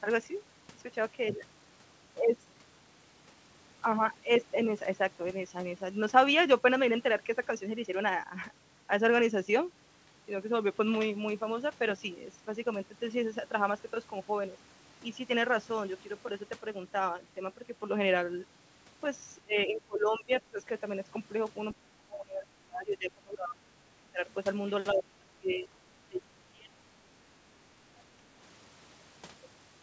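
Speech here dips sharply, dulls and breaks into fragments from 19.38 to 20.59 s, 21.79 to 24.22 s, 24.93 to 25.67 s and 26.07 to 27.38 s, with short dropouts at 27.76 to 27.82 s and 28.16 to 28.23 s, falling by roughly 15 to 30 dB at worst. This is likely speech suppressed in double talk: with both ends talking at once, the echo canceller could not separate the talker from the echo and turned both down. From 25.49 to 25.59 s a faint scrap of a second voice, around 30 dB below the talker, slips through. It is likely the other side's voice leaking through, because the echo canceller left some of the loudspeaker signal in the microphone pickup.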